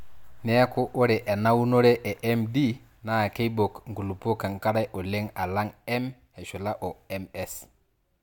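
No technical faults can be heard in this speech recording at any point.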